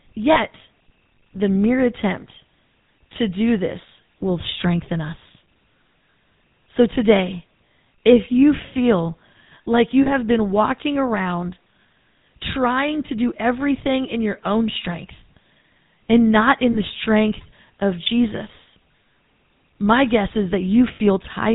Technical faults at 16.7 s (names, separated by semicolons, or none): GSM full-rate codec; lost GSM frames